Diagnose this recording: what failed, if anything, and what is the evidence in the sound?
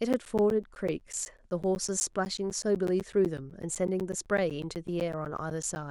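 Regular ticks pepper the speech from 0.13 s to 5.76 s, one every 0.125 s, each a silent gap of around 10 ms. These are periodic USB or driver dropouts: a background task stalls the USB bus or audio driver at a fixed interval, discarding audio each time.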